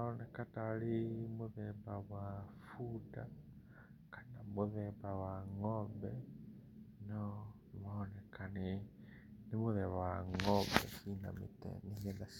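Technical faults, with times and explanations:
No technical faults are audible anywhere in this speech recording.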